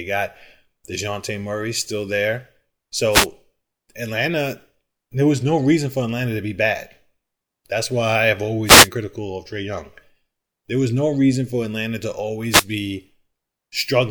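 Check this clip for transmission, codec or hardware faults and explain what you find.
Three wireless microphone noise hits break into the speech, at 3.11 to 3.27 s, 8.64 to 8.89 s and 12.49 to 12.65 s. Each is a brief swish of static, as the FM radio signal fades through cancelling reflections and receiver noise surges up.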